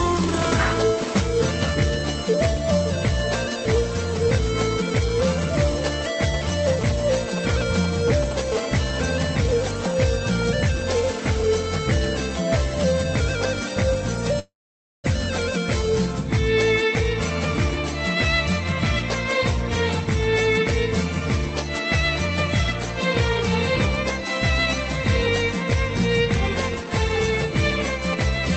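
What we've got here is call audio with its top end stopping around 8 kHz, and it picks up interference from a nearby 2G handset in two forms. First come GSM signalling bursts from 6.34 to 8.33 s, sitting roughly 10 dB under the audio. That's the galloping dit-dit-dit of short 217 Hz buzzes a phone makes while it's only exchanging control traffic with the network, with the audio circuitry rectifying each radio burst into sound. The same signalling pattern comes back at 26.73 s, a bit quieter at roughly 15 dB down, and runs to the end of the clip. In between, from 8.52 to 9.98 s, it turns into the steady GSM phone buzz, a hard, raspy 217 Hz drone full of harmonics at about 18 dB below the audio. That continuous buzz is what you'd expect once the phone settles into transmitting every frame, as it does on an active call, and it has nothing to do with the programme material. Then there's a call audio freeze from 14.39 to 15.06 s. 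The sound hangs on briefly as a fading tail and then drops to silence for about 520 ms, giving a 645 ms hold in total. When it resumes, it picks up exactly where it left off, so nothing is lost and everything after it just arrives late. The likely cause is packets stalling in transit long enough for the jitter buffer to run dry, with the receiver stretching out the last bit of sound until delivery caught up.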